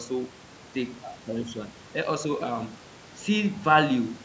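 Speech, with no technical faults to report.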